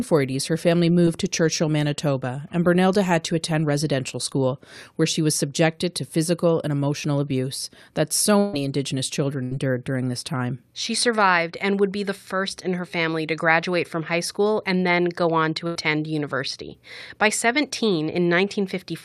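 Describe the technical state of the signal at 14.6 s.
At 14.6 s the speech signal is intact, with no audible fault at that point.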